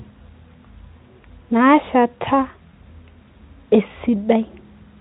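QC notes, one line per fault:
Nothing stood out on listening to this speech clip.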